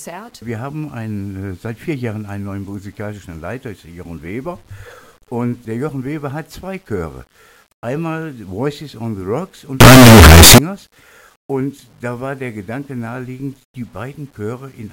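A signed and unsigned mix-up runs from 9.81 to 10.58 s: for about 0.78 s the sound turns into very loud, harsh distortion in which quiet moments come out as loud as everything else. The likely cause is 8-bit samples being read with the wrong sign convention, which flips the top bit so every zero crossing jumps across the whole range.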